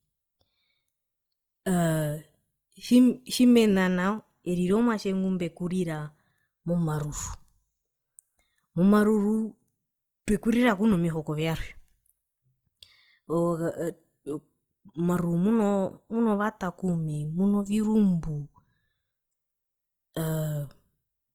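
Opus compression runs throughout the speech and is plainly audible: the sound turns rough, grainy and noisy rather than swirly. The likely cause is Opus music mode at a rate that fits 24 kbps, filling starved bands with folded or noise content while keeping full bandwidth to 20.3 kHz.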